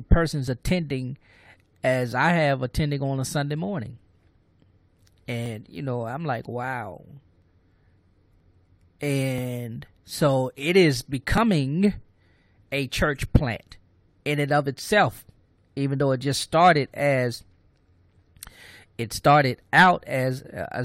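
Speech with a string of tiny clicks or skips, each where a few to about 20 milliseconds of sound drop out and the waveform jumps: at 0.48 s, 1.46 s, 5.46 s (just before "you know I'm"), 6.44 s (just after "you know I'm"), 7.42 s, 8.40 s, 9.38 to 9.40 s, and 11.38 s (just after "so it is"). The steady spacing near one second points to overlap between stream segments. The 1-second segments' time stamps overlap, so the player trims audio that was never duplicated.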